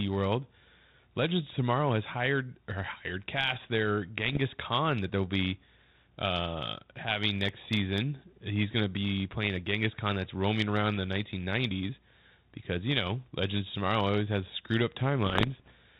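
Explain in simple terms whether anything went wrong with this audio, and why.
Bit errors on an ADPCM link threw off the decoder's tracking. This caused rough pops and jumps in level after "or hired cast their" (4.29–4.38 s) and "has screwed up" (15.26–15.72 s).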